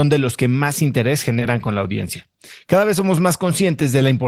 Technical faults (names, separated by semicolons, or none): short concealed packet loss